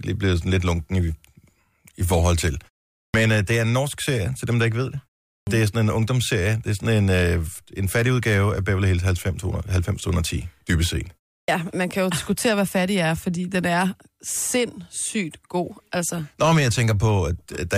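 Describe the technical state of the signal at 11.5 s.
A clipped start after a pause at 11.42 to 11.48 s: after about 0.31 s of silence the output wakes late, swallowing roughly 63 ms, so the sound begins abruptly.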